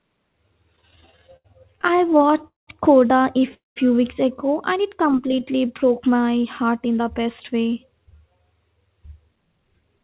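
Repeated stalls (stutter) run from 0.76 to 2.70 s. Packets kept reaching the receiver late, so its jitter buffer emptied about 26 times in under two seconds. Each time, the receiver carried the last sound forward until fresh audio arrived. The longest hold is 198 ms, and about 554 ms of invented sound fills 29% of that stretch. Nothing is dropped, but the speech keeps catching and dragging, with held fragments where it should flow.

A short stall from a late packet follows at 3.39 to 3.44 s. One packet missed its playout moment, the buffer ran dry, and the receiver stretched the preceding sound by 15 ms before resuming exactly where it had paused. The result is a brief smear, a sound lingering a touch too long with a faint buzz or dip, and then the speech carries on with that small added delay.

A call audio freeze sits at 3.54 to 3.79 s. The sound hangs on as a fading buzz or hiss and then drops to silence for about 160 ms, with 218 ms filled in all before the speech picks up from where it broke off. 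This is likely packets held up in transit, leaving the buffer empty for the whole wait. The effect is a gap inserted into the speech rather than anything cut away.

A jitter buffer speed-up runs from 5.60 to 8.44 s. The buffer was holding more audio than its target, so the receiver trimmed many tiny slices, each a pitch period or a few long, to work the backlog down. Roughly a third of a second is removed, and playback runs at 109% speed. The pitch stays put, but the speech sounds rushed across those three seconds.

All of this passes through a call path with nothing above 4 kHz, which fits a G.711 mu-law link at 64 kbps.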